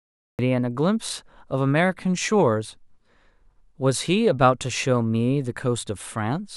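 Speech clip with a cut-off start. It is digital silence until 0.39 s, then the speech begins abruptly mid-sound with no natural attack. Recording began late.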